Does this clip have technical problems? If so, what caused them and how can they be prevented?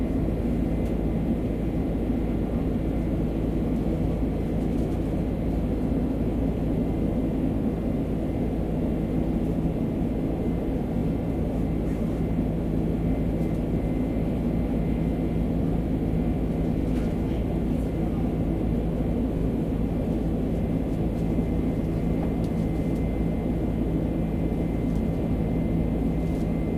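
Yes. Repeated frames: a run of compressed frames was written or sent more than once, so the decoder replays a short block and the sound briefly stutters. A 21.3 ms block plays twice more at 10.96 s, and 42.7 ms blocks repeat once at 16.81 s and 19.37 s, each event adding 42.7 ms. Checking frame sequence numbers or timestamps before writing or decoding would let the duplicates be caught and dropped.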